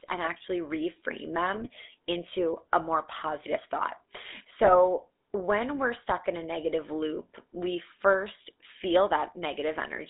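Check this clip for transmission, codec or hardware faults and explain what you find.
Two things stand out: the whole clip has been through the GSM full-rate codec, and there are two short bursts of GSM bit errors on top of that.

GSM full-rate codec, throughout: the speech sits in a narrow line band from roughly 250 Hz to 3.7 kHz, with that coarse, buzzy grit you get when the vocal tract is modelled and fed a sparse pulse excitation. Only a decimated slice of that excitation survives, so the fine detail is gone and the voice sounds gravelly. The damage is plainly audible, and it fits a 13 kbps full-rate stream.

GSM bit errors, 1.54 to 1.68 s and 4.63 to 4.75 s: the first lands right after "and actually reframe", just before "into a more positive". The second comes just before "when we're stuck in". Both sound like a quick gargle with squawky, popping level jumps. Corrupted filter, pitch or gain parameters are throwing the spectrum and loudness off for a run of frames. 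Each burst is about 0.12 to 0.15 s long, which points to roughly six or seven hit frames.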